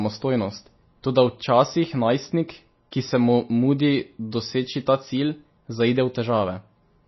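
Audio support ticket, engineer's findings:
Treble gone above 5.8 kHz throughout. Watery, swirly texture on sibilants, smeared onsets. Likely MP3 compression. Encoder starved of bits: fixed treble cutoff, weak spectral lines toggling frame to frame. Damage plainly audible, fits a bitrate near 24 kbps.

Pre-echo at 2.91 s. Brief hiss, about 12 ms, ahead of a sharp onset. Same transform codec. Quantisation noise spread across the whole block, so noise sized for the attack leaks into the quiet before it. Attack sounds softened.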